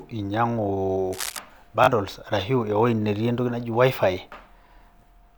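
From 1.13 to 1.39 s, a burst of cable scratch noise rustles over the speech, roughly 10 dB below it. The sound is dense and uneven. It is likely a worn cable or connector being moved, so its contact resistance flickered rapidly.

At 1.84 to 1.88 s comes a Bluetooth stutter. About 37 ms of audio went missing, which fits two lost packets. The receiver replayed its last short slice until data returned. This gives a brief machine-gun buzz, then the speech jumps ahead.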